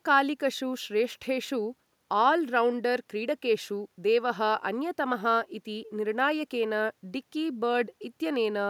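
Nothing in the recording stood out as a problem on listening.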